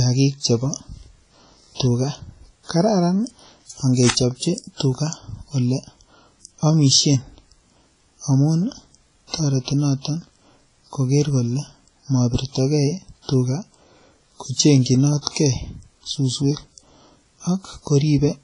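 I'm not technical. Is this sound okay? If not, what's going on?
No. The whole recording sounds washy and ringing, with a hiss that swells and fades along with the speech, and the crisp top end is missing above about 10.5 kHz. That points to heavy WMA compression as the likely cause, squeezing the file hard and blurring detail.

Twice near the end, from 15.21 to 15.27 s and again from 15.31 to 15.35 s, a brief hiss arrives just before a sharp sound and softens its start. This is pre-echo: the compression smears noise backwards into the quiet moment before each attack.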